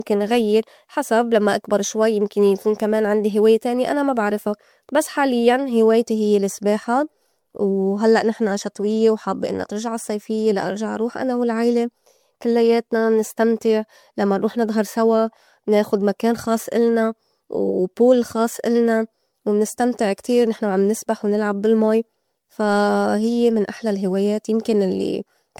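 From start to finish the speech carries a swirling, hollow smear, and consonant attacks arrive blurred rather than crisp. Content stops just below 19.9 kHz, which fits an MP3 chain at 96 kbit/s, yet the damage sounds worse than that rate alone would cause. This is likely generation loss from encoding about five times over: each pass re-quantises on a shifted frame grid, so spectral holes and noise stack up, unlike the cleaner dullness of one low-bitrate encode.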